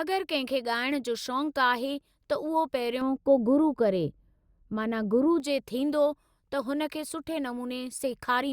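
From 3.01 s to 5.40 s the speech turns dull and muffled, as if heard through cloth, with the treble sloping smoothly away to about 11 dB down at 10 kHz. This is de-emphasis applied wrongly: a treble cut meant to undo pre-emphasis was applied where none existed, or applied twice.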